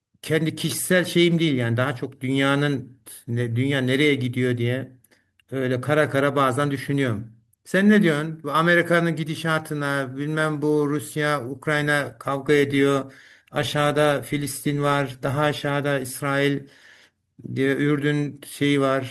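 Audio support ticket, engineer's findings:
Speech signal checked across the full capture with no technical faults found.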